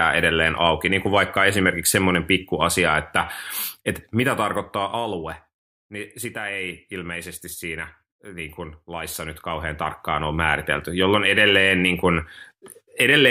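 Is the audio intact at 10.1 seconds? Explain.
No. At 10.1 seconds there is a fine ticking, zipping texture riding on the speech, part of a stretch of zipper noise running from about 8.96 to 10.45 s, between "siinä eh niin kuin" and "jolloin edelleen niin kuin". The level changes by roughly 10 dB there, but in unsmoothed steps at around fifty a second. Each abrupt jump puts a small click into the waveform, and together they make the zip.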